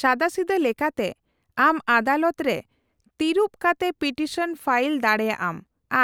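No technical faults can be heard anywhere here.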